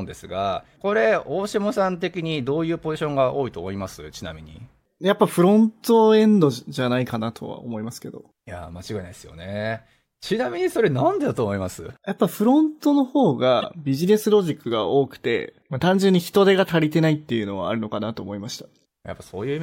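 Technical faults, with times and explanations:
13.60 to 13.64 s, corrupt frame decoded: a fairly loud chirp-like burst as a couple of damaged compressed frames play anyway, scattering energy into wrong frequencies.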